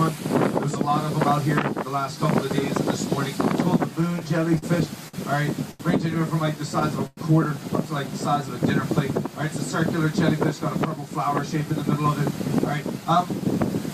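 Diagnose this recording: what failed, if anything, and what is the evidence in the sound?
Repeated stalls (stutter) at the network and jitter-buffer stage run from 4.01 to 5.81 s. The sound halts eight times, with the longest hold about 81 ms. Each time the last sound is stretched to cover the wait, adding about 214 ms in total and nothing lost. Packets were arriving more slowly than playback consumed them, so the buffer kept running dry. Unlike dropouts, there are no holes; the audio drags and hitches instead of skipping.

A call audio freeze follows from 7.07 to 7.19 s. The last sound is held and decays for about 103 ms, with roughly 10 ms falling to silence, and then the audio resumes exactly where it paused. The whole stream ends up about 103 ms later than before. The likely cause is a single late burst of packets emptying the jitter buffer. It is one isolated pause rather than a chain of short ones, which is what separates it from the stutter.

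A jitter buffer speed-up from 10.06 to 13.17 s plays the audio at about 104% of normal speed, with the pitch unchanged. The receiver had accumulated surplus delay and trimmed it by repeatedly cutting out pitch-period-sized slices, removing somewhere around 150 ms overall. Because the pitch does not rise, this is not a resampling or clock-rate error. Only the timing is compressed.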